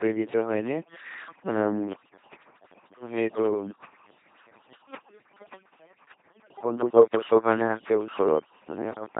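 Two faults run through the whole speech clip. The first is overdone noise removal. A noise reducer was set far too strong. Any frequency band close to its guess of the noise gets pushed down hard or cut out. Quiet parts of the speech are lost along with the noise. The background drops and breaks up into small twinkling specks.

The second fault is the LPC-10 vocoder, and the damage is heavy. The sound points to LPC-10 at 2.4 kbit/s. This coder rebuilds speech from a small vocal tract filter. It drives that filter with either a pulse train or noise. Each moment is treated as fully voiced or fully unvoiced. The result is a buzzing, mechanical robot voice. Wrong voicing choices produce stray buzz or hiss. Nothing is left above 3.8 kHz, so the top end sounds dull.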